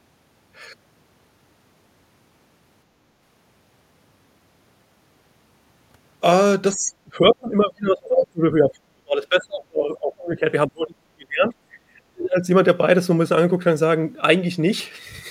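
A speech recording whose level falls away in three stretches, from 6.72 to 10.46 s, 10.67 to 11.55 s and 11.83 to 12.48 s, dipping by as much as about 35 dB. This is speech suppressed in double talk, likely from an echo canceller turning the talker down while the far side spoke.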